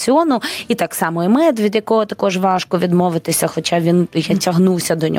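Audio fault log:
throughout: gain pumping. The input gain was likely set far too high, so a fast limiter or compressor clamps down on every loud moment. The gain swings about 10 dB, ducking under louder speech, leaving everything squashed.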